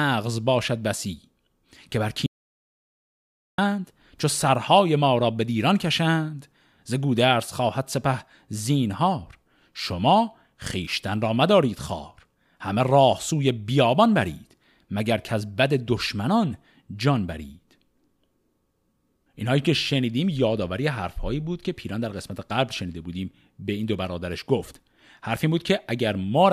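At 2.26 s the input feeding the recorder most likely dropped out, through a lost connection or a momentary mute, while the recording kept running and filled the gap with silence. The result is an audio dropout to silence: the speech cuts off abruptly, and for about 1.3 s, until 3.58 s, there is total silence with no room tone. The speech then resumes mid-flow, and whatever was said during that stretch is missing.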